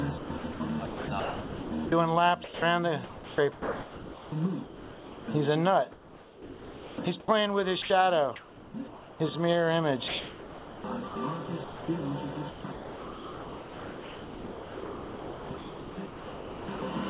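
The sound comes through a narrowband call path with nothing above 4 kHz, and in five stretches it turns choppy: 0.18–1.92 s, 2.44–5.28 s, 5.92–7.28 s, 10.08–11.88 s and 12.5–16.82 s. Quiet parts give way to flat hiss. This is sound chopped by the voice detector, likely a sender repeatedly deciding the signal was background and swapping in comfort noise. About 1.1, 2.0, 1.1, 1.1 and 4.0 s are replaced respectively. At 7.82–7.90 s an 80 ms piece of sound vanishes into steady noise. This is sound dropped by the voice detector, likely because the detector mistook that moment for background and stopped transmitting. From 7.82 to 9.2 s the natural background goes featureless and uniform for about 0.78 s in total. This is comfort noise in place of the background: the sender likely paused transmission during silence, and the receiver filled the gap with a synthetic noise roughly matching the background's level and colour.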